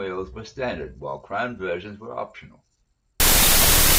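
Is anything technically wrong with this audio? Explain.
Yes, from 3.2 s to the end of the speech at 3.99 s there's a wrong sample width fault. The samples are being read with a different byte count than they were written with. The sound points to 32-bit float data read back as 16-bit integers, so many values are stitched together from mismatched bytes. You hear loud, harsh noise with the speech buried underneath, running at half speed and an octave low.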